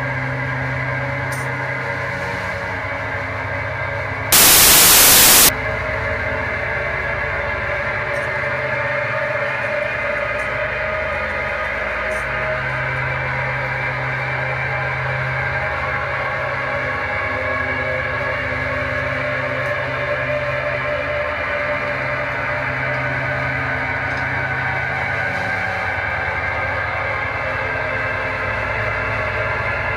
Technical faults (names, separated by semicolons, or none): samples built from the wrong bytes